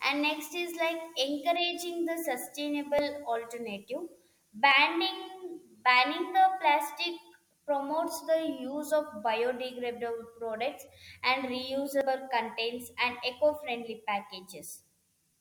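At 2.99 s and 4.72 s the speech jumps, each skip losing around 20 ms, and at 12.01 s, right before "contents and", a bigger jump drops about 70 ms. It's likely a dropped buffer (overrun), with samples overwritten before being read.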